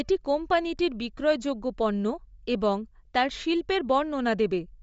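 Throughout, the speech stops at 7.7 kHz, with grainy, breathy noise filling the upper band, likely Bluetooth LC3 compression at a bitrate consistent with 32 kbps.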